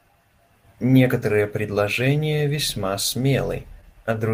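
Clock drift between sender and receiver runs through the whole speech clip. The sender's clock runs roughly 3% slow, so audio reaches the receiver too slowly. The jitter buffer keeps draining. Small timing hiccups recur at uneven intervals.

From 0.87 s to 3.90 s, repeated timing corrections follow. The receiver repeats short pieces to fill the gap. Playback runs at 98% speed and gains about 70 ms overall. The edits are small and unevenly spaced, heard, if at all, as slight stumbles or an unsteady tempo.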